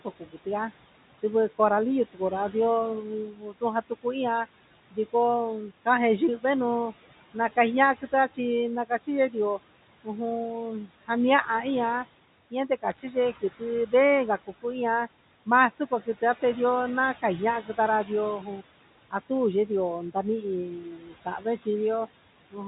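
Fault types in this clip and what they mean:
noise suppressor artifacts: The room noise, sitting about 17 dB under the speech, sinks by about 17 dB in the gaps and swells back beneath each phrase. A suppressor is cutting, frame by frame, whichever frequency bands it judges to be steady noise.
speech cut by the noise suppressor: Soft consonants, word endings and quieter stretches sound swallowed, dipping by up to about 18 dB across 0.0 to 0.47 s, 2.13 to 11.09 s and 12.51 s to the end. The suppressor mistook these quiet parts of speech for background.
bit errors on a digital phone line: A short burst of corrupted samples sits on top of the speech from about 12.90 to 13.00 s. Flipped bits in the mu-law telephone stream each corrupt single samples, at an error rate of roughly a third of a percent.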